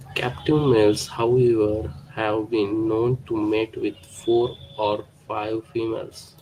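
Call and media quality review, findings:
Call and media quality review turned up no findings for this speech recording.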